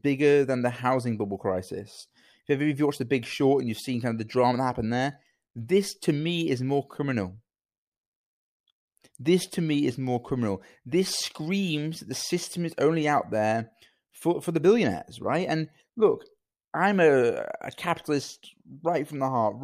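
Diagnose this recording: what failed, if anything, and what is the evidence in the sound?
Nothing in the chain has failed, and the speech signal reaches the listener intact and continuous at every stage from capture to playback.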